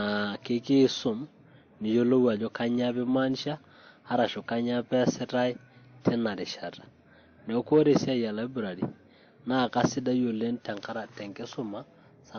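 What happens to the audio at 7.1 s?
At 7.1 s, like the rest of the clip, the speech carries layered codec smearing and keeps the lowest cut-off of the chain, likely from transcoding between lossy codecs, each pass compounding the last's artefacts.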